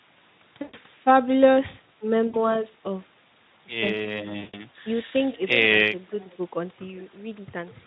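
Speech, carried over a call link whose Speex coding leaves only light hoarseness. Three stretches show VoIP packet loss concealed by the speech codec: 0.62–0.74 s, 2.27–2.63 s and 4.39–4.62 s, covering roughly 120, 60 and 140 ms of lost audio. The decoder repeats the last pitch and spectral shape at falling gain, so the sound smears into a buzzy, fading tone instead of dropping to silence as a plain dropout would. It stays weak after each gap; the shortest loss sounds affected until about 2.63 s.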